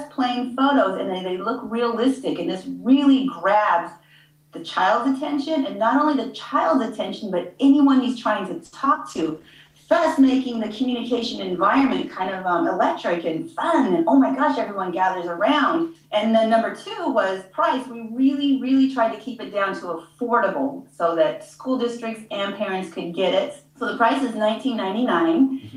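Between 8.65 and 8.99 s the stream suffers repeated packet loss, with four gaps, the longest 70 ms. About 100 ms is patched by stretching the preceding sound and about 60 ms is simply missing, so nearly a third of that span is concealed. It comes out choppy and robotic, with pieces absent. From 9.1 to 12.5 s a call bitrate drop forces the encoder from 32 kbps down to 15 kbps, where it stays for about 3.3 s. With far fewer bits it codes coarsely and trims the upper frequencies, so the audio turns rough, watery or muffled until the rate recovers. Overlapping this, from 9.24 to 9.7 s, a jitter buffer slow-down repeats tiny slices of audio to rebuild its reserve, adding 41 ms. The sound plays at 92% speed with unchanged pitch and is audibly drawn out. From 13.18 to 14.88 s the opposite happens: a jitter buffer speed-up trims around 70 ms of surplus buffered audio in short cuts. Playback runs at 104% speed at the same pitch.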